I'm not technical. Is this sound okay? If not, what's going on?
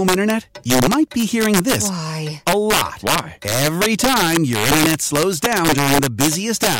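No. Throughout the speech, the loudest moments produce sharp, violent cracks. This is integer overflow. The recording was pushed louder than the digital format can hold, and instead of being flattened at the ceiling, the peaks that went over wrapped around to the opposite extreme. Only a small fraction of the sound crosses that limit, so the damage lands in brief bursts on the strongest syllables. Each burst sounds harsher than ordinary distortion.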